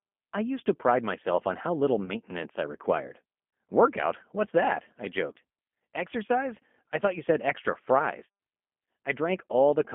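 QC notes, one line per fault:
Throughout: G.729 codec. The whole clip passes through a narrow telephone band of roughly 200 Hz to 3.4 kHz, so everything above that is gone and the sound is boxed-in and thin. At 8 kbit/s the codec does not keep the waveform. It rebuilds each 10 ms frame from a vocal tract filter, a pitch predictor and a few pulses, which leaves the speech plainly rough and slightly synthetic.
2.06 to 2.12 s: VoIP packet loss concealed by the speech codec. Right after "myself on how little", about 20 ms of audio went missing, which points to a single lost packet. The decoder filled the hole by repeating its last pitch and filter settings at falling gain, so the sound smears into a stretched, fading fill. Because each frame predicts from the one before, the voice stays weak or distorted for tens of milliseconds or more after the audio returns.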